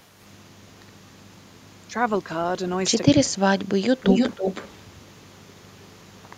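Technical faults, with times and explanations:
1.87–1.94 s, speech suppressed in double talk: the sound briefly drops by about 10 dB for roughly 70 ms, likely because an echo canceller mistook overlapping far-end talk for echo and ducked everything. A waveform shows a short notch in the envelope, and a spectrogram shows a thin vertical band of weaker energy.
4.0–5.08 s and 5.37–6.2 s, echo leak: a copy of the speech returns 313 ms late, likely from loudspeaker pickup that the echo canceller failed to remove. In the first stretch the copy is roughly as loud as the speech itself. In the second it is a faint trace, around 40 dB down. A spectrogram shows the harmonic striations repeated about 0.31 s to the right, strong in the first stretch and barely visible in the second.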